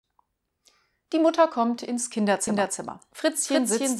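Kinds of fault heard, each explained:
Doubled audio track: from about 2.47 s to the end, a second full-band copy of the speech runs roughly 0.3 s behind at about the same level, likely from a slower capture path. Unlike an echo, it starts abruptly and has no decay or room colour.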